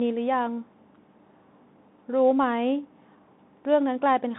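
Throughout, the speech carries the Bluetooth CVSD headset codec: a one-bit delta coder that tracks the waveform in adaptive up-or-down steps, which fits a 64 kbps link. A spectrogram shows energy confined to about 150 Hz to 3.7 kHz. Sibilants sound scratchy and a granular hiss lies under the speech.

At 2.43 s comes a Bluetooth headset packet repeated event. About 11 ms of audio, which fits three lost packets, is replaced by the previous packet decoded over and over. It is heard as a brief buzzy tick. The waveform shows one short segment copied three times at 3.75 ms spacing.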